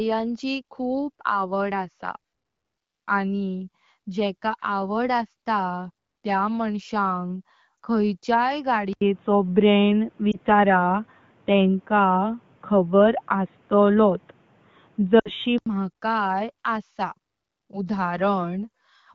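At 7.77 to 7.79 s a single lost AMR speech frame causes a brief dip as the decoder repeats its last good settings at falling gain. On the waveform it shows as a short notch in the envelope. On a spectrogram it is a thin smeared slice.

From 8.93 to 15.66 s the sound goes dull and boxy. The input was likely switched to a poorer device. There is a gap of about 80 ms at the switch. The spectrogram then shows nothing above 3.8 kHz, against the fuller band of the AMR wideband path around it. The level shifts by roughly 5 dB, and a faint new noise floor sits around 40 dB below the signal.

Within that stretch, another single lost frame at 10.31 to 10.40 s gives a quick warble. From 15.19 to 15.30 s a run of three frames, about 60 ms, drops to near silence within two frames, showing as a band that quickly fades before the sound returns weak.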